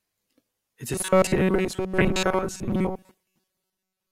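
From 0.93 s to the end at 4.12 s, the speech turns into a rigid, metallic buzz pitched at 188 Hz, still loosely tracking the words. This is robotic sound from repeated short buffers. The likely cause is audio arriving too seldom, so the software loops a snippet of about 5.3 ms, the period of that 188 Hz tone, while most of the real signal, around two thirds or more, is skipped.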